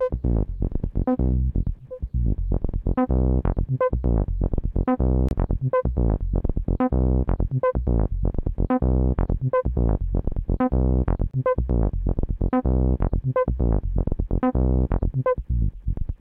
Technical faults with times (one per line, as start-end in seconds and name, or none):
5.29-5.31 gap between chunks
11.31-11.34 gap between chunks